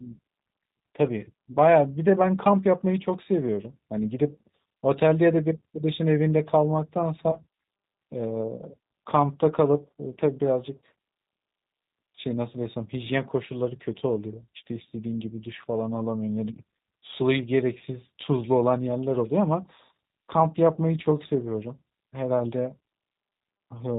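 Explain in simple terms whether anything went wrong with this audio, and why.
The whole recording has gone through the G.729 codec, a low-rate phone codec that rebuilds speech from a simple model of the vocal tract plus a handful of pulses every few milliseconds, instead of storing the actual waveform. Everything above 4 kHz is cut off, so the speech sounds muffled and narrow. The damage here is plainly audible: the voice has a slightly rough, synthetic edge the whole way through, even though it stays easy to follow.

There are also two short moments of VoIP packet loss concealed by the speech codec, from 1.52 to 1.57 s and from 7.31 to 7.40 s. Each matches a gap of about 20 ms, which fits a single lost packet. When that chunk went missing, the decoder guessed by stretching the last bit of sound it had, so you hear a brief stretched smear that fades. Because each frame builds on the one before, the voice takes a moment to sound right again after each gap.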